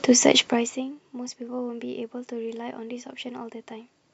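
No technical fault can be heard anywhere in this speech recording.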